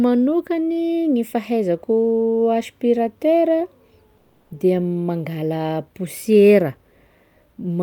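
At 4.17 s the speech stalls in a call audio freeze lasting until 4.52 s. The last sound is held and stretched into a fading buzz or hiss for about 330 ms. It never drops to silence. When the audio resumes, it picks up exactly where it stopped, so nothing is lost. Instead, everything after it arrives about 330 ms later. The likely cause is delayed packets draining the jitter buffer, leaving the receiver to fill the wait.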